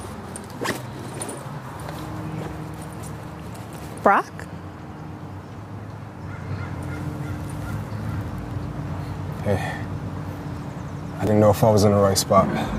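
The audio has two brief clicks, at 3.26 s and 11.27 s, caused by overlapping chunks: the signal was handled in 4.0 s blocks, each starting slightly before the previous one ended, so about 6.5 ms of sound repeats at those joins and produces a small stutter.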